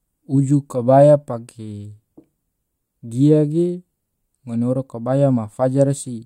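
No technical faults can be heard anywhere in this speech recording.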